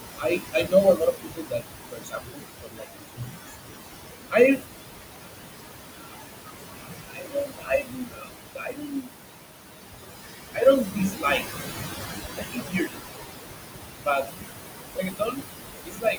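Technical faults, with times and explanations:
Throughout: noise suppressor artifacts. The processor pulls down every band it judges to be steady noise by about 20 dB, frame by frame, so the background falls away in pauses and surges back under the speech. The room noise sits only about 4 dB below the speech, so the suppressor is working against strong noise. Unlike a simple gate, the texture of the remaining noise changes in place of it switching cleanly on and off.
0.18–3.53 s, 4.31–4.65 s, 5.21–9.19 s, 10.54–13.04 s, 13.98–14.33 s, 14.95 s to the end: speech cut by the noise suppressor. In these stretches the suppressor mistakes parts of the speech for noise and turns them down with the background by about 20 to 22 dB at the deepest. This adds up to roughly two seconds in the first run, three in the third, a second and a half in the fourth, and well under a second in each of the others. 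Soft consonants and word endings sound swallowed or faint. Because the words themselves are attenuated, this differs from the artifacts, which mostly affect the noise around the words.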